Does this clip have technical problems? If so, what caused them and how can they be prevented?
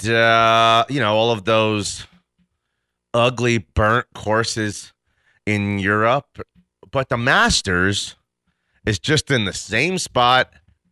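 No, this clip has no technical problems, so there is nothing to prevent.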